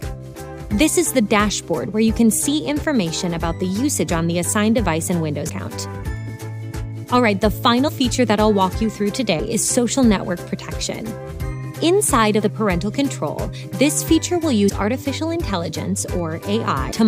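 Compressed frames get skipped seven times, at 2.81, 5.48, 7.87, 9.38, 12.40, 14.68 and 16.91 s. Each time the sound jumps ahead, by roughly 50 to 100 milliseconds in the first six. The last jump is about a fifth of a second. The steps fit whole frames of roughly 23 ms.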